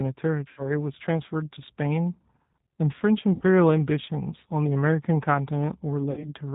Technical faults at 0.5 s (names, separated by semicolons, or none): G.729 codec; VoIP packet loss concealed by the speech codec